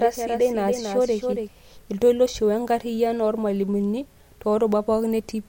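Speech, opening with a doubled audio track: from the start to 1.48 s a full-band copy trails about 300 ms behind, roughly 5 dB quieter and dry, then stops abruptly before "iltoiloshi wenkarriyano oormalimuni". Likely a second, slower capture path mixed in.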